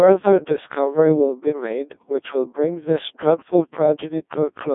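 Throughout, Codec 2 vocoder resynthesis makes the speech robotic and buzzy, fitting a 1.2 kbit/s mode; the spectrogram shows synthetic harmonics, 300 Hz–3.6 kHz, empty above 3.8 kHz.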